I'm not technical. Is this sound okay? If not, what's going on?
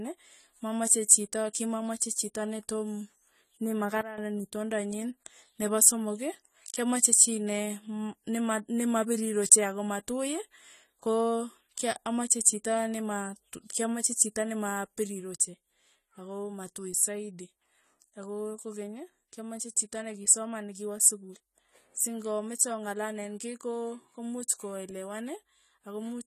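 No. The whole clip sounds dull and noticeably warbly, with nothing above 14 kHz, which is likely AAC compression at a low quality setting squeezing out detail.

There are also two sudden gain jumps, likely from a volume change applied without any fade. At 4.01 s the level drops abruptly until 4.18 s. At 14.99 s, just after "kyamache chito nema", it drops again and stays lower to the end.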